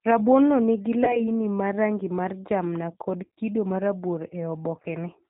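Throughout, the speech has passed through the G.729 codec at what sounds like 8 kbit/s. The voice is rebuilt from a vocal tract filter, a pitch predictor and a few pulses per frame, with nothing above 4 kHz. It comes out plainly rough, band-limited and slightly synthetic.

VoIP packet loss concealed by the speech codec occurs three times. Each time the decoder lost frames and filled the gap by extrapolating its last pitch and filter at falling gain. The first is at 1.04 to 1.21 s, after "no nigi" and before "ma rangi mar jamna". It fits roughly 30 ms of missing audio, stretched into a buzzy or noisy smear that lingers before the voice recovers. The second is at 3.23 to 3.39 s, after "rangi mar jamna kod". Losses scattered over about 140 ms, with the longest gap near 40 ms, leave a weakened stretch. The third, at 4.82 to 4.85 s, points to about 20 ms lost and is a brief dip.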